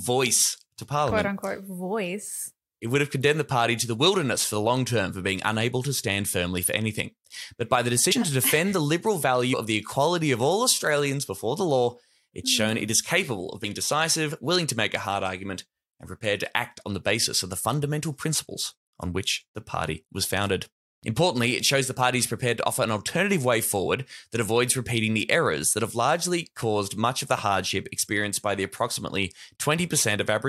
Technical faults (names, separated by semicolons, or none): compressed frames skipped